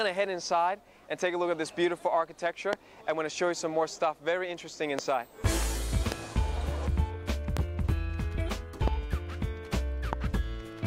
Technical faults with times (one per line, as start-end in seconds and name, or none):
2.73-2.75 loud pop
4.99-5.01 loud pop
6.12-6.14 loud pop
7.57-7.59 loud pop
8.88-8.90 loud pop
10.13-10.15 loud pop